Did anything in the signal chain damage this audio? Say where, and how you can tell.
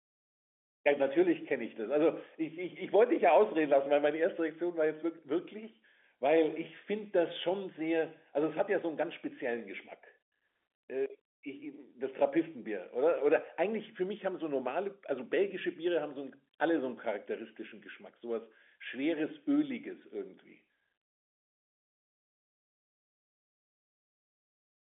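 No, the speech is carried intact over a G.711 mu-law telephone path, with the expected line band of about 250 Hz to 3.5 kHz, nothing above 3.7 kHz, and at most a faint, level-following quantisation hiss from the 8-bit logarithmic coding.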